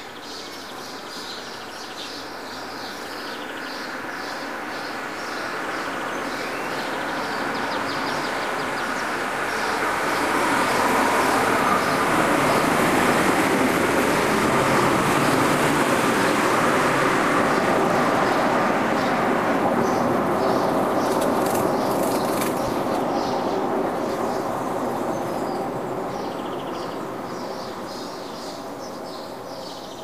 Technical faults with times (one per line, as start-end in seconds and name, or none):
22.68 underrun with held sample